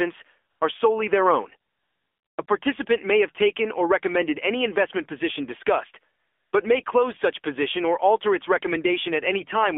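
Speech passes through the AMR narrowband mobile codec, limited to about 250 Hz to 3.5 kHz. The voice sounds buzzy and synthetic, which fits a low bitrate near 7.4 kbps. AMR comfort noise replaces the pauses at 0.50–0.60 s and 1.72–2.38 s, at 2.46 s before "may have taken or", at 6.20–6.52 s after "any investment position discussed", and at 6.84 s after "position discussed but may". At those points the phone stopped sending speech frames, and smooth synthetic noise fills the gaps.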